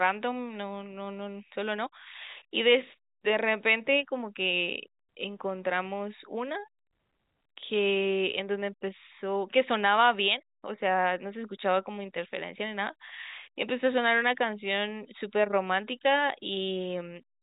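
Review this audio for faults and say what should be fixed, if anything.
Nothing in the audio needs to be fixed, because no faults can be heard.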